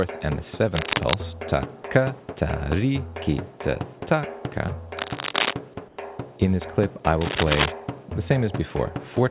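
Three bursts of cable scratch noise sit over the audio at 0.74 to 1.17 s, 4.97 to 5.53 s and 7.21 to 7.73 s, each roughly as loud as the sound itself (the middle one a bit louder), likely a worn lead or connector shifting its contact. At 5.88 s, for 100 ms, there's comfort noise in place of the background: the real room tone, sitting about 29 dB below the loud parts, gets swapped for smoother synthetic noise about 3 dB quieter, which points to discontinuous transmission on the call link. The audio also came through a call path with nothing above 4 kHz, which fits 64 kbps G.711 A-law.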